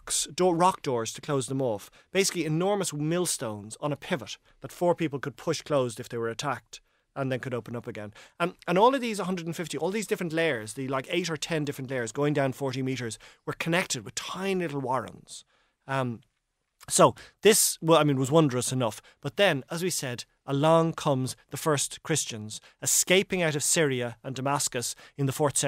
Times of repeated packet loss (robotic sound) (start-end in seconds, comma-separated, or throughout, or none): none